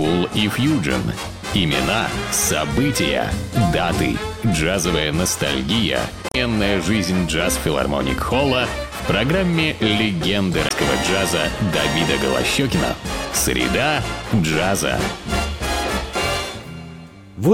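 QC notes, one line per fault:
6.29–6.36 s and 10.67–10.72 s, damaged data in a compressed stream: two short bursts of about 70 ms and 40 ms where part of the encoded stream was corrupted. The decoder misreads those frames and loses sync until it finds the next valid frame header, so each one comes out as a brief chirp, squawk, click or short hole.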